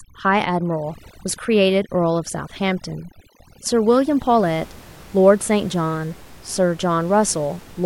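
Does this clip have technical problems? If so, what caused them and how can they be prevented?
Yes. From 0.0 to 4.44 s the speech shows overdone noise removal: a noise reducer set too aggressively cuts individual frequency bands whenever they sit near its noise estimate, so the background drops and breaks up into twinkling specks and the quieter parts of the voice are stripped away. Unlike a low-bitrate codec, the artefacts follow the noise floor, and the room noise, about 24 dB below the speech, returns afterwards. Setting gentler reduction strength prevents this.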